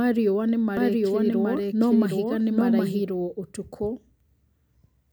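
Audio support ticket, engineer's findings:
Doubled audio track, 0.77 to 3.03 s. Speech heard twice, second copy trailing by about 0.7 s at roughly equal level. Copy full-band, dry, no room tail; starts and stops abruptly. Likely cause: second capture via slower path or misaligned duplicate in an edit. Spectrogram: formant pattern repeated, shifted right by about 0.7 s, hard vertical edges at both ends. Waveform: overlapping envelopes, level jump where the copy enters.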